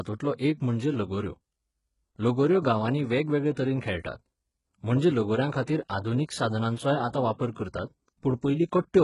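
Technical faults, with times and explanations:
Throughout, HE-AAC compression: heavy codec damage, with nothing above about 11.1 kHz and a treble that sounds bright yet synthetic. The likely cause is spectral band replication at a very low bitrate, around 12 kbps, copying lower bands upward, so harmonics misalign and s sounds turn gritty and lispy.
5.65 to 5.67 s, pre-echo: a brief hiss spreads about 23 ms ahead of a sharp attack, which sounds softened and smeared. The codec distributes quantisation noise across its whole transform block, so noise sized for the loud onset also fills the quiet gap just before it.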